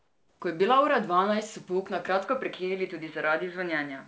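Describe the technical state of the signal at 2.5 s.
At 2.5 s the sound is in the span after what is likely an input switched to a poorer device, which begins at 2.25 s, right after "pouk na", and runs to the end of the clip. The band closes to nothing above 4.6 kHz, narrower than the 8 kHz ceiling of the G.722 call path, so the sound turns dull and boxy. On a spectrogram the energy drops sharply at 4.6 kHz, and a faint new noise floor sits roughly 45 dB below the signal. The waveform shows no gap and no level step at the switch.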